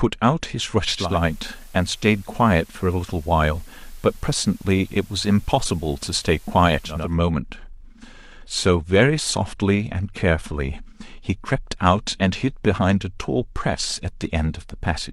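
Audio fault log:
0.87–7.18 s, digital radio blending to analogue: The receiver loses its digital signal and cross-fades to the station's FM broadcast, then returns to digital at 7.18 s. Each blend takes about 0.36 s. A soft hiss appears under the speech, about 30 dB below it, because the FM path carries its own background noise. The level stays the same, since the two paths are matched in loudness.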